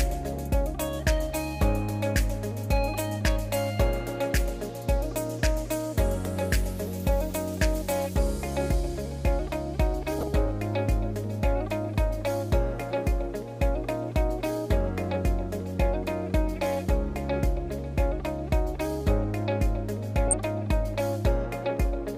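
Two short bursts of DAB burbling break into the sound, from 10.19 to 10.33 s and from 20.28 to 20.36 s. Weak reception left a bit error rate of around a fifth of a percent, and some errors slipped past error correction into the MP2 data. Corrupted samples put short blips of noise in single sub-bands, and corrupted scale factors make sub-bands leap in level for up to a frame. The bursts hit about ten and about five frames respectively. Unlike a packet-loss dropout, the audio never goes silent. Band-limited garble sits on top of it instead.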